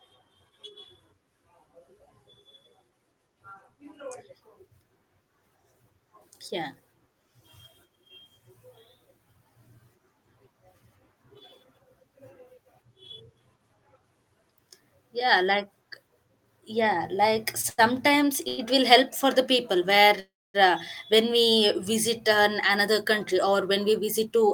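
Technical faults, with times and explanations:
17.61–17.65, 17.69–17.80 and 18.48–18.60 s, short stall from a late packet: the jitter buffer ran dry, so the last sound is held for 21, 87 and 96 ms before the speech resumes intact.
20.20–20.56 s, call audio freeze: likely packets held up in transit. The held sound fades to silence for 250 ms of the 343 ms gap, then the speech continues without loss.
22.30–24.43 s, jitter buffer speed-up: the receiver trimmed excess buffered audio by cutting tiny pitch-period slices, about a tenth of a second in total, so the speech runs 5% faster at unchanged pitch.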